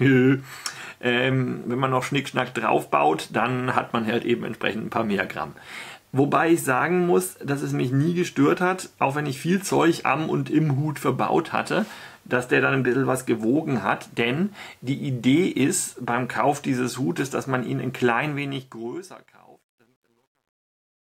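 From 18.28 s to the end, the fade-out beginning around 18.3 s shows truncation distortion on a fade. Undithered gain, consistent with 11-bit resolution, leaves the waveform in square steps. From 19.13 s the tail turns gritty, with broadband hash speckling the spectrogram.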